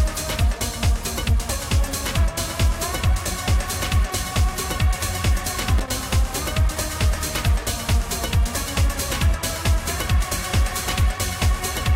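At 5.78 to 6.04 s, a worn or dirty contact in the signal path briefly loses and regains connection, producing loose connector crackle. Each make and break chops the audio and jolts the line, so for about a quarter second the sound breaks into an irregular, scratchy burst of crackle.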